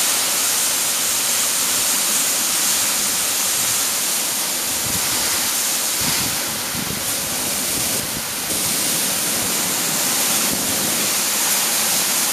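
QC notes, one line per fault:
1.5–3.0 s, 4.0–6.0 s, 7.0–8.5 s, 9.5–11.0 s: chunks out of order. A 0.5 s chunk plays two places late (three at 4.0 s), scrambling the sequence with three hard joins.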